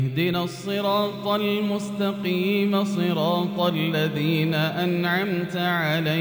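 Crude rate conversion runs through the whole clip. The sound fits a step from 32 kHz up to 48 kHz done by repeating the nearest samples without filtering. The repeating error sits roughly 25 dB below the signal and adds a gritty, inharmonic fizz that follows loud and high content.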